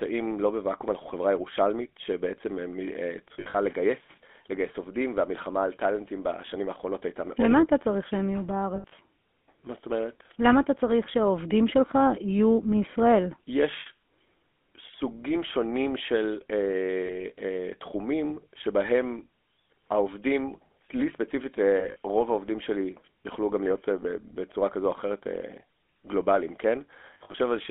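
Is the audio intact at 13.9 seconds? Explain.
No. At 13.9 s the sound has just come out of a brief run of lost GSM frames, from 13.8 to 13.87 s. For about 60 ms, consistent with three 20 ms frames, the decoder had no usable data and kept reusing the settings of the last good frame. That holds the sound as a short, rough, metallic ring. An ordinary dropout would fall to silence or give a click. Here the sound lingers with a tinny, smeared quality, and because the gap is so short it never fades fully to silence before normal decoding resumes.

The GSM full-rate codec is also audible at this moment, as it is for the whole clip. The codec models the vocal tract and drives it with regularly spaced pulses, reconstructing only a thinned version of the excitation signal. This gives the speech a plainly audible buzzy, gravelly roughness, consistent with 13 kbps full-rate coding. The band runs from 250 Hz to 3.5 kHz, so the sound is thin and has no air above that. 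A plain telephone band-limit would narrow the sound in the same way without the buzzy, gravelly texture.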